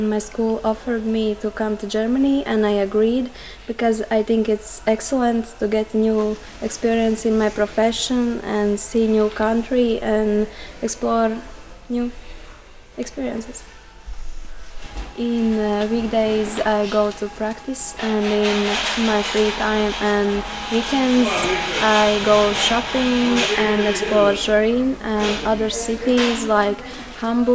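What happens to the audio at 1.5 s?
Nothing goes wrong at 1.5 s; the audio plays through that moment intact, with no dropout, click or distortion.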